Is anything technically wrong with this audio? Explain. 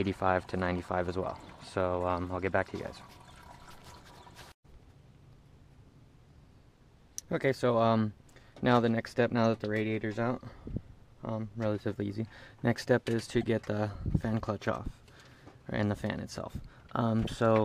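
Yes, there's one glitch worth flagging. Right around 13.41 to 13.43 s you get a corrupt frame decoded: a couple of compressed frames arrived with flipped bits, and the decoder played them anyway instead of concealing them. The damaged data misplaces energy in frequency for just those frames, so you hear a quick chirp, squeak or blip, roughly 24 ms long, peaking somewhere around -30 dBFS.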